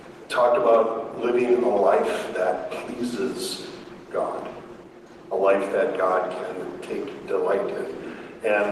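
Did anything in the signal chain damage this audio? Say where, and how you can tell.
No, none of the stages from capture to playback left any audible damage on this audio.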